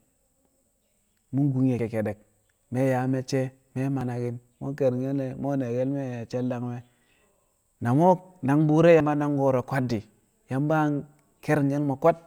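At 1.79 s, between "kun ye̱" and "kekkedek mi̱", the speech lurches forward, with roughly 40 ms missing and no gap. This is the pattern of a dropped buffer (overrun): likely the capture side failed to read its samples before the hardware overwrote them, so the surrounding audio is spliced directly. The same short skip recurs at 4.01 s, and a larger jump, about a tenth of a second, comes at 9.00 s, just before "nang ko̱ro̱".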